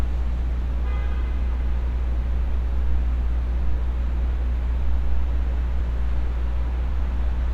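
No technical faults are audible anywhere in the recording of sounds.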